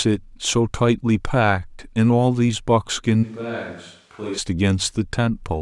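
From 3.25 to 4.37 s, the speech abruptly turns hollow and roomy. It drops about 10 dB, loses bass and gains background noise. This is likely a switch to a distant microphone.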